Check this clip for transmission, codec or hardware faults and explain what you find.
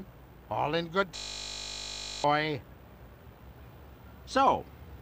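There is one fault, a system hang loop from 1.16 to 2.24 s. The driver or system stalled while the hardware kept replaying a 20 ms stretch of its ring buffer, 54 times over. That short loop becomes a steady 50 Hz buzz, and about a second of audio is lost.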